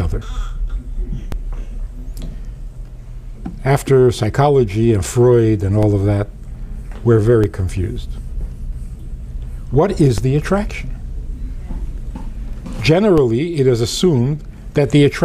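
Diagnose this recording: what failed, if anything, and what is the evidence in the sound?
A DC step fault at the converter stage: the zero line jumps abruptly at 1.32, 5.83, 7.44, 10.18 and 13.18 s, each heard as a low thump while the sound carries on unchanged. The offsets are about -10 dBFS for the first two and about -8 dBFS for the last three. On the waveform the baseline leaps off centre, then drifts back as a 20 Hz high-pass drains it. A spectrogram shows a brief low-frequency smear at each time.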